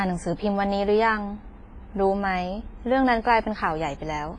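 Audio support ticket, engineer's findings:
Likely WMA compression, heavy, throughout: low-bitrate transform coding (fits about 24 kbps) with long blocks smearing quantisation noise over tens of milliseconds and zeroing weak lines. Speech rings and sounds washy, hiss breathes with level, nothing above 10.6 kHz.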